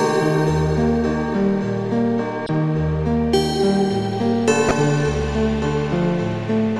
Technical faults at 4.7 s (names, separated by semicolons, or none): corrupt frame decoded